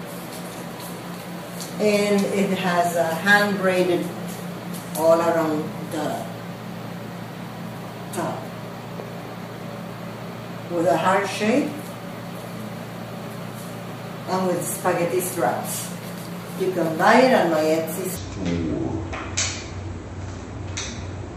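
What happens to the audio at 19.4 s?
At 19.4 s the audio sits inside a section at the wrong speed, running from 18.17 s to the end at about 0.53 times normal rate, likely from playback on a mismatched clock. Unlike a pitch shift, timing slows along with pitch, which drops roughly ten semitones.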